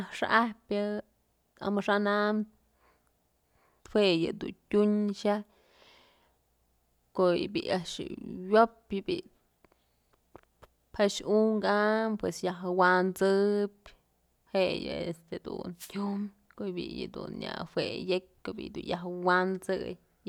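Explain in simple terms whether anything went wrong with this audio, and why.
A wireless microphone noise hit occurs from 15.77 to 15.92 s, a brief burst of static lasting about 0.15 s. The radio link from the microphone briefly weakened as reflected signals cancelled each other, so the receiver's own hiss rose.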